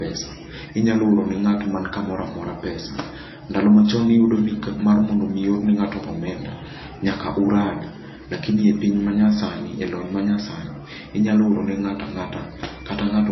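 Low-bitrate audio saved at a high bitrate, throughout: nothing above 5.8 kHz and MP3 artefacts remain, likely from a low-bitrate encode later re-saved at a higher rate.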